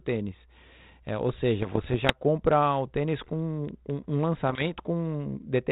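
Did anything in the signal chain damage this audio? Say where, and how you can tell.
Yes: bit errors on an ADPCM link, in the transmission path of the 32 kbit/s G.726 call, at 1.61 to 2.18 s and 4.48 to 4.69 s. Pops and rough bursts with brief level jumps show flipped bits upsetting the decoder's step size and predictor, ringing on for milliseconds.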